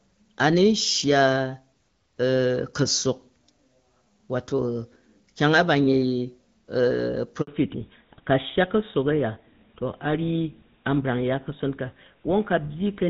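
At 7.41 s a handover gap cuts the speech. The call switched networks, and no frames arrived for about 60 ms. The sound dies away within a few tens of milliseconds and returns at 7.47 s. Whatever was said in that gap is lost.

From 7.47 s to the end, the call shows a fallback to narrowband. Up to the gap it ran on HD Voice, which fits AMR-WB at 12.65 kbit/s. It then switched to an older codec that sounds like GSM full rate. Nothing above 4 kHz survives, so the speech turns dull and rougher.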